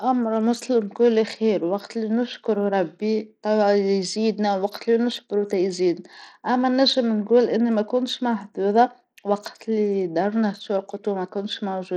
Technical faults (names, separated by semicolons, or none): Bluetooth SBC compression